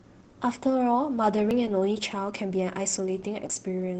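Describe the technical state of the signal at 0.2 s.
Opus voice compression is present at 0.2 s, as it is across the whole clip. The speech runs through the SILK linear-prediction coder in wideband mode, so nothing above about 8 kHz survives, and the excitation is coded coarsely, which fits a bitrate around 12 kbps. The damage is plainly audible: the voice sounds muffled and dull at the top, with a hoarse, slightly robotic grain in place of a clean, natural tone.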